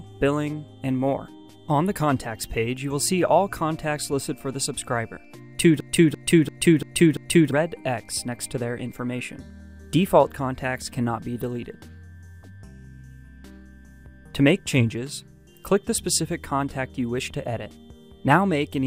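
At 5.80 s there's a system hang loop running to about 7.51 s. The machine or its driver stalled while the audio hardware kept replaying its ring buffer, so one 341 ms slice repeats exactly five times, which fits a 16384-sample buffer. At 2.93 Hz that's slow enough to hear as a choppy, machine-gun stutter rather than a buzz, and about a second and a half of the real audio never makes it through.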